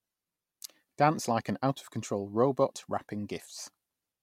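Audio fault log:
No fault is heard in this speech clip.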